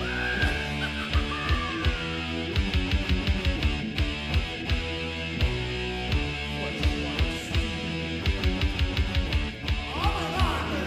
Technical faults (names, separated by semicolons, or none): none